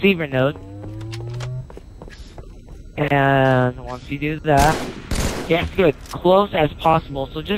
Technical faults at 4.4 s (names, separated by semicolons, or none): none